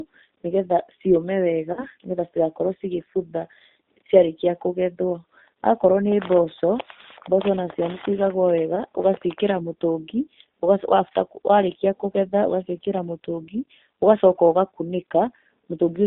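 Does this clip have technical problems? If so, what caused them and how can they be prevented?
Yes. The whole recording carries the sound of the G.729 codec at 8 kbit/s. The speech is squeezed into a telephone band of roughly 250 Hz to 3.7 kHz and rebuilt from a vocal tract model plus sparse pulses, which gives it a rough, slightly synthetic edge. On a spectrogram the energy stops abruptly at the top and bottom of that band, with smeared, blocky harmonics. Using a wideband codec such as G.722 or Opus prevents this.

VoIP packet loss concealed by the speech codec is heard twice, from 1.73 to 1.85 s and from 8.76 to 8.84 s. In each gap the decoder kept repeating its last pitch and filter at falling gain, so the speech is stretched into a fading tone or noise and then recovers. The first dropout covers 40 ms of missing audio and the second 10 ms, which fits about four lost frames and then one. 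On the waveform these look like short, evenly repeating cycles that shrink in level. Jitter buffering, forward error correction or a more reliable network path would prevent it.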